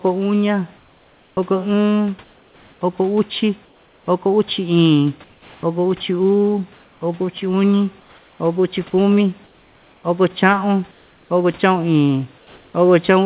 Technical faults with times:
0.77-12.74 comfort noise in place of the background
8.90-8.93 sound dropped by the voice detector

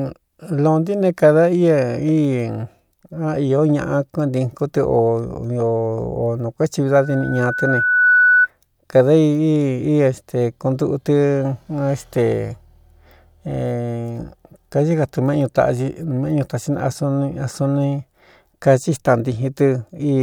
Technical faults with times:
6.88-8.48 loudspeaker feedback squeal

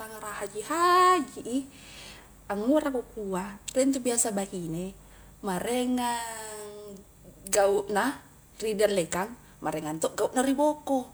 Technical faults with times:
none

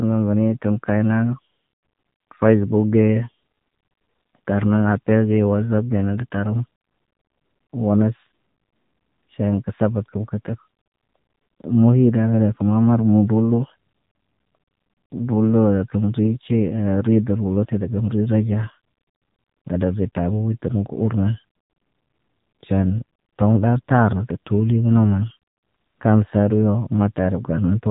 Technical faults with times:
0.00-27.91 AMR narrowband mobile codec

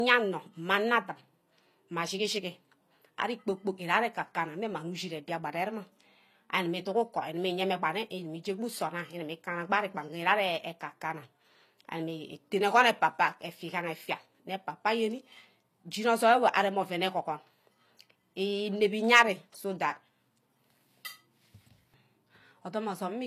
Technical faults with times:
0.00-23.27 low-bitrate audio saved at a high bitrate

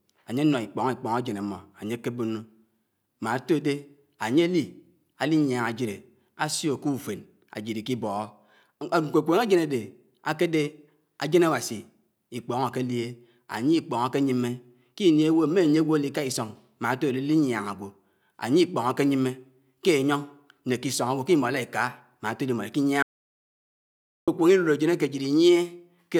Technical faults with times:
23.03-24.28 audio dropout to silence

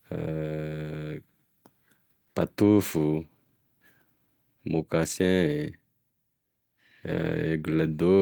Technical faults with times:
none

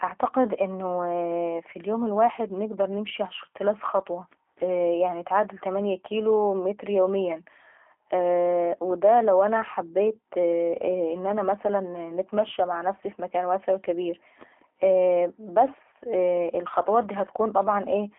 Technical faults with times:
0.00-18.18 G.729 codec

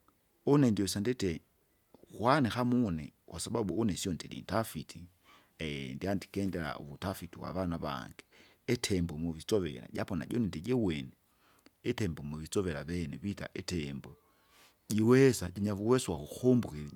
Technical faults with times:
none

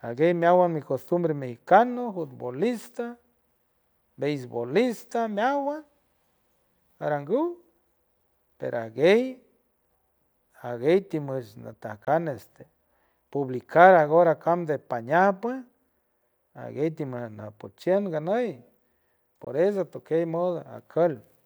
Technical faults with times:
12.05-12.07 Bluetooth dropout
19.44-19.47 Bluetooth dropout

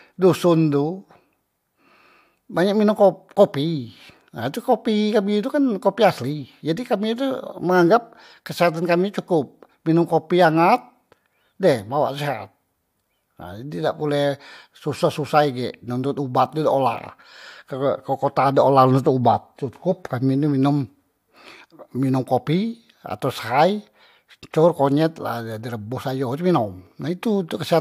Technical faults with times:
none

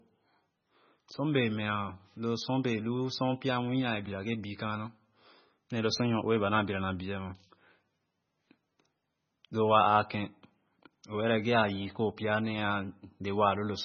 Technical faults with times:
0.00-13.85 MP3 compression

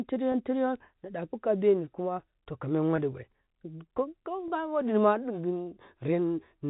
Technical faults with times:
0.32-0.34 packet loss with pitch repetition
2.96-2.98 packet loss with pitch repetition
4.48 packet loss with pitch repetition

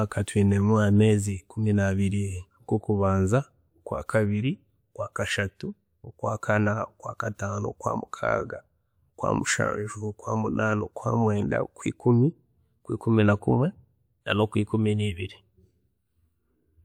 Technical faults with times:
11.38 corrupt frame decoded

